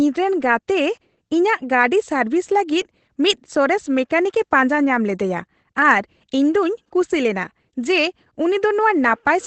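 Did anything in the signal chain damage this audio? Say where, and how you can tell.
Yes, at the codec stage, where Opus voice compression has left plainly audible damage throughout the speech. Nothing remains above about 8.5 kHz, and the voice sounds slightly hoarse and robotic, which fits Opus running in its SILK speech mode at around 12 kbps. SILK models the voice with linear prediction and codes the excitation coarsely at that rate. That roughness separates it from a plain low-pass filter, which would dull the sound without adding grain.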